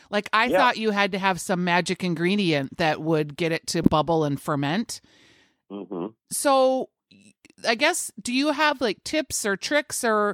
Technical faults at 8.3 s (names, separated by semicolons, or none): none